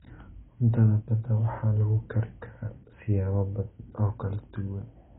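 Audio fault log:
Throughout: AAC compression, likely the cause of this damage. Nothing is heard above 3.8 kHz, so the speech sounds dull and muffled. Heavy quantisation leaves a warbling, fizzy texture on sibilants and held sounds, which fits a very low bitrate around 16 kbps.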